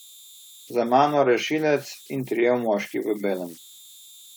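Converter idle tones run through the whole clip. An undithered delta-sigma converter cycles through repeating bit patterns, leaving a whistle around 4 kHz, about 26 dB below the speech.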